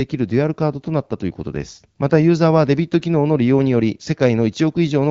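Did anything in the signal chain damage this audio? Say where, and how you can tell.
No, nothing in the chain damaged this speech; it has passed through the AMR wideband (HD Voice) codec at 12.65 kbit/s, a rate at which that codec keeps speech clear, with the band up to 6.4 kHz modelled directly and the range from 6.4 to 7 kHz filled with shaped noise as the format intends.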